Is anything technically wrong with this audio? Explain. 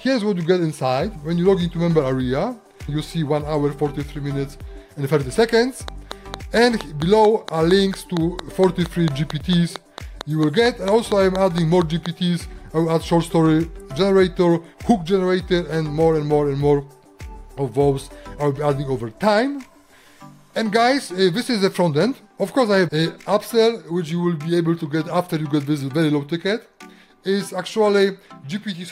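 Yes. From 5.88 to 12.07 seconds there is a train of clicks, about thirty in all. They arrive at a steady 4.37 per second, each with much the same sharp shape. They stand out clearly, roughly 10 dB above the underlying sound. The regular pacing points to a repeating electrical pulse, likely interference from nearby equipment or a faulty connection or power supply. It is heard as an even ticking laid over the audio. It continues through any pauses too.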